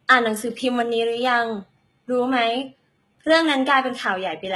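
HE-AAC compression, running through the whole speech clip, is the likely cause of the heavy damage heard here. The treble is rebuilt by copying lower bands upward, so s sounds turn gritty and lispy, with a metallic sheen that fits a bitrate near 16 kbps.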